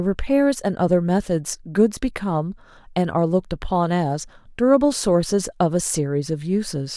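No technical faults can be heard anywhere in this speech.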